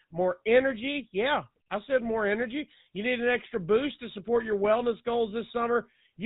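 Speech runs through a GSM full-rate codec for the whole clip. Nothing above 4 kHz survives, so it sounds dull and telephone-like. The pulse-driven excitation adds a buzzy, gravelly roughness that is plainly audible. The damage fits the old 13 kbps GSM rate.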